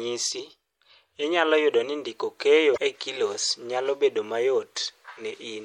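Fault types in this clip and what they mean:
MP3 compression: Throughout the speech there is a watery, swirling quality, with the top end sounding dulled and sibilants turning metallic and chirpy; the damage is plainly audible. This is likely lossy MP3 encoding with too few bits to go round, which fits a low bitrate around 64 kbps: the encoder drops the highest frequencies and lets weaker spectral detail flicker in and out from frame to frame, smearing sharp onsets.
Damaged data in a compressed stream: Two brief glitches break in, a short squawk or blip from 0.36 to 0.40 s and another from 2.73 to 2.78 s, each lasting around 45 ms. They come from corrupted bytes inside the compressed stream: the decoder hits frames it cannot read properly, loses its place and has to hunt for the next valid frame header, so a fragment of garbled sound is heard before normal playback resumes.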